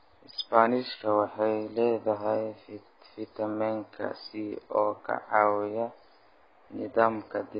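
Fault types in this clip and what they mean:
AAC compression: the speech stops dead at 5 kHz and sounds dull and smeared, with warbling, fizzy sibilants, likely from heavy AAC-LC coding at a rate fitting about 16 kbps. Unlike a plain low-pass filter, the remaining band is itself patchy and garbled.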